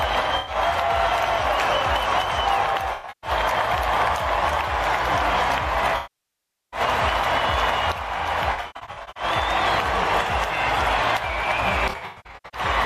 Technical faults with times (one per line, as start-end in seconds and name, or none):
0.37-0.55 AAC frame loss with concealment
2.93-3.30 AAC frame loss with concealment
5.96-6.80 AAC frame loss with concealment
8.51-9.23 AAC frame loss with concealment
11.89-12.61 AAC frame loss with concealment